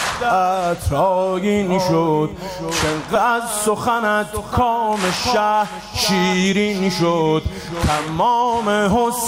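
At 3.15 s the audio lurches forward with no gap: roughly 0.7 s of material is simply absent, and the sound on either side is butted together almost seamlessly, so the cut registers as an abrupt jump rather than a dropout. This is a skip ahead. A run of packets was discarded, either lost in transit or thrown out by an overfull jitter buffer, while later audio was already queued, so playback resumed from the newer material and the listening delay fell by about the same 0.7 s. Just after, from 3.25 s to 4.90 s, the sound runs slightly fast, about 105% of normal speed, with the pitch unchanged, giving that stretch a faintly rushed feel. That is a jitter buffer speed-up: the receiver still held more audio than its target and trimmed a series of tiny pitch-period-sized slices, removing around a tenth of a second in total to pull the delay back down.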